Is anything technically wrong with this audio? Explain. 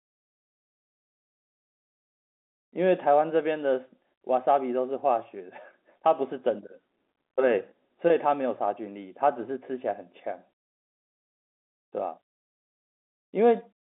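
No, nothing stood out on listening to this speech recording as technically wrong; it has the narrow band of ordinary G.711 telephone coding, with nothing above roughly 3.8 kHz.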